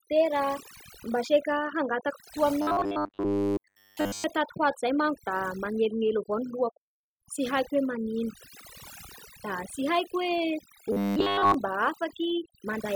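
The speech in this clip suffers from overdone noise removal throughout. The background between phrases drops to near silence dotted with twinkling specks, because quieter components are being suppressed along with the noise. Individual frequency bands that sit close to the noise estimate are pushed far down or switched off. That band-by-band gating is what distinguishes it from a plain low-pass or from broadband muffling: the damage flickers rather than staying steady. Twice the voice turns into a rigid, metallic buzz at 100 Hz, from 2.62 to 4.24 s and again from 10.92 to 11.54 s. This is robotic sound from repeated short buffers, likely caused by a roughly 10 ms chunk of audio being replayed while fresh audio arrives too slowly. Throughout the first stretch, and for about 70% of the second, the audio is roughly repeated. That fixed buzz rate separates it from the watery warble of the noise removal, which never imposes a steady tone.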